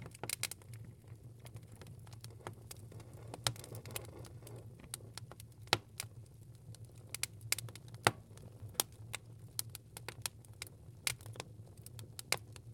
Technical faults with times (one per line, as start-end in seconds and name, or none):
8.60 audio missing between chunks